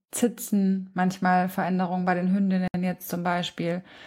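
At 2.68 s, just after "bei den", the speech drops into a 64 ms silence, a gap at a join of encoded pieces, where encoder delay and padding were left untrimmed.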